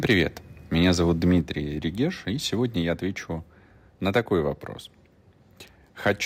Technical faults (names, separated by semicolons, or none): microphone overload; microphone volume stepped down